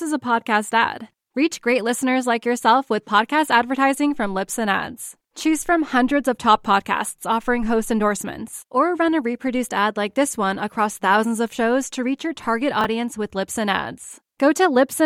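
Chunks out of order occur at 12.81 to 12.85 s in this speech recording, right after "to reach your target". A single 10 ms chunk of audio arrived or was written three chunks late, so it plays after the 30 ms of sound that should have followed it. Nothing is missing, but the sequence across those 40 ms is scrambled, leaving three hard joins where mismatched pieces of waveform meet and producing a brief jumbled moment in the speech.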